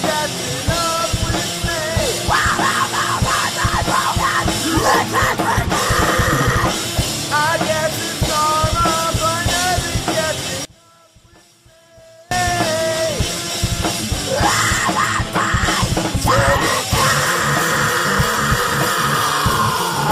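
Between 10.65 and 12.31 s the audio drops by about 29 dB and turns faint. The likely cause is one channel inverted. With one stereo side flipped in polarity, the shared centre content cancels in mono. Only a small difference signal remains.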